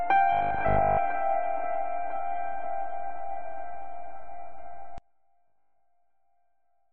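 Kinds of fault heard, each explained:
Robotic sound from repeated short buffers: The music turns into a rigid metallic buzz at 50 Hz, likely from tiny repeated 20 ms chunks replacing most of the real audio, at 0.33–0.99 s and 5.48–5.80 s.
One channel inverted: From 4.98 s to the end, summing to mono drops the level by about 28 dB, likely because one channel's polarity is flipped, cancelling the shared centre content.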